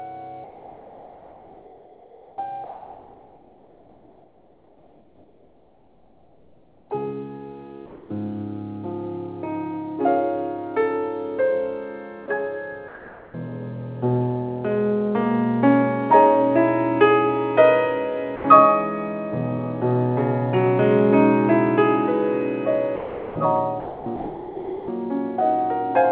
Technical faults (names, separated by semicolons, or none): comfort noise in place of the background; sound dropped by the voice detector; sound chopped by the voice detector